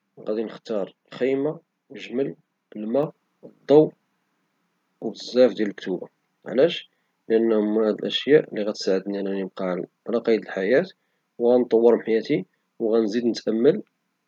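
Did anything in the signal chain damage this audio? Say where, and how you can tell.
Yes, a microphone volume step-up in call processing: at 3.03 s everything jumps about 5 dB at once, background included, as the software bumped the input gain.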